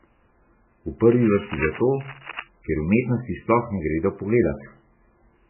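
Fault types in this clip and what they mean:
MP3 compression: Nothing is heard above 3 kHz, and the speech sounds heavily watery and swirly. This fits likely MP3 coding at a very low bitrate.
cable scratch noise: From 1.12 to 2.44 s, before "ker umetnosti", dense scratchy bursts sit fairly loud under the speech. A likely cause is a worn, moving connector.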